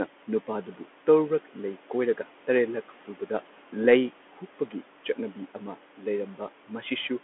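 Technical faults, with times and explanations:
Throughout, Bluetooth CVSD headset codec: the speech is confined to a narrow telephone band of roughly 250 Hz to 3.4 kHz, with nothing above 3.8 kHz, and the coding damage is plainly audible. The sound is coded as a single up-or-down bit per sample, which fits a 64 kbps stream, with an adapting step size. Fast, loud high-frequency content outruns the step, so sibilants turn scratchy and a granular hiss sits beneath the speech.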